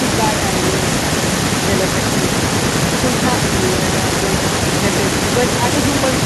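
Nothing technically wrong turns up anywhere in this speech recording, so there's no fault to point to and no cause to explain.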